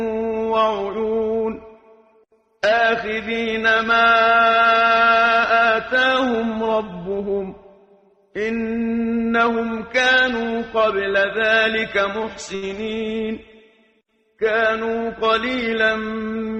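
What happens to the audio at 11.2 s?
Nothing goes wrong at 11.2 s; the audio there plays through intact, with no dropout, click or distortion.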